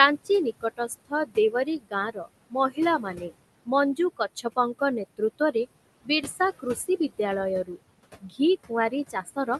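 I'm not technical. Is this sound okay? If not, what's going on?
No. Noise suppressor artifacts run through the whole clip. A cleaning filter keeps guessing which parts of the sound are steady background hiss and turns those parts down, moment by moment. The room's background noise, which sits fairly close under the speech, drops away in the pauses and creeps back in under the talking.

Speech cut by the noise suppressor happens at 0.61 to 3.31 s, 3.66 to 4.81 s, 5.17 to 5.55 s, 6.6 to 7.19 s and 8.21 to 9.48 s. The same filter mistakes quiet bits of speech for background noise and turns them down along with it. Soft sounds and word endings come out swallowed or faint. The first stretch is the worst, with about a second of speech dulled in total. The later ones lose only brief moments.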